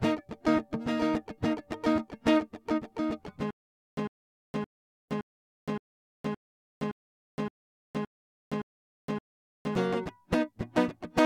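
Stutter with silent gaps, 3.51 to 9.75 s: the same 101 ms burst of music repeats eleven times, each followed by 467 ms of digital silence, in a steady 568 ms cycle. This is likely a stalled stream replaying its last fragment at each retry, and the music that should have played is lost.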